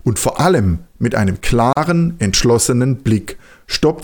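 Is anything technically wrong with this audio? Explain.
Yes. At 1.73 to 1.77 s the speech stops dead for about 39 ms, a gap at a join of encoded pieces. Two separately encoded sections were butted together untrimmed, so the encoder's start-up delay and last-frame padding remain as silence. Its edges are smeared by the codec, and the speech resumes exactly where it left off. Nothing is lost, which separates it from a dropout, where sound vanishes and the flow skips ahead.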